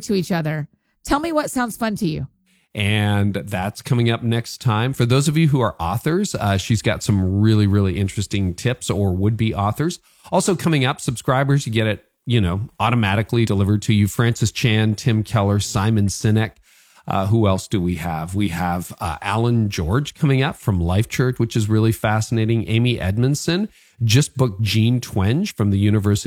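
At 13.42, 21.32 and 25.45 s the speech jumps forward, which is compressed frames skipped: each time roughly one frame, around 50 ms, never gets decoded. The jump fits a 46.4 ms frame.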